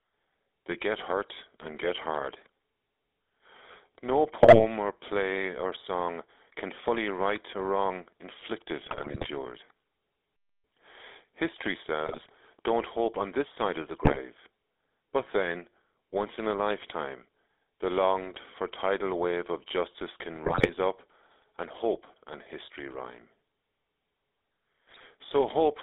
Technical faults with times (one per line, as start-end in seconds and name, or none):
0.00-25.82 GSM full-rate codec
4.40-4.65 GSM bit errors
8.84-9.27 GSM bit errors
12.06-12.30 GSM bit errors
14.02-14.19 GSM bit errors
20.44-20.71 GSM bit errors
24.90-25.05 GSM bit errors